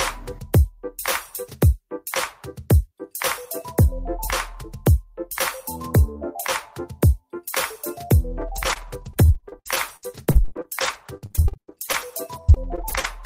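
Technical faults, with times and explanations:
8.41 to 13.05 s, repeated packet loss (robotic sound): the audio turns choppy, with short holes following one another. Several dozen gaps, the longest 79 ms, add up to about 900 ms of missing audio, roughly a fifth of this stretch. Each hole was covered by stretching the last sound received, about a second of patched audio in all.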